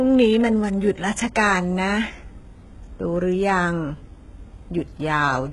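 From start to end the speech carries heavy HE-AAC compression damage, likely at a very low bitrate. The treble is rebuilt by copying lower bands upward. Sibilants turn gritty and metallic. Nothing is heard above 11.4 kHz.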